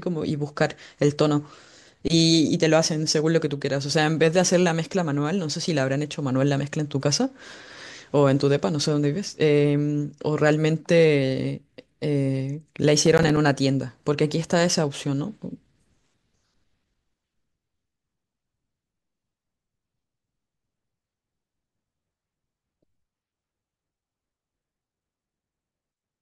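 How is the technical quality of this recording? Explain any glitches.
One glitch stands out. From 13.06 to 13.37 s, processor overload crackle: the processor repeatedly missed its deadlines for short buffers of around 5 ms, leaving hard-edged silent gaps heard as gritty crackling.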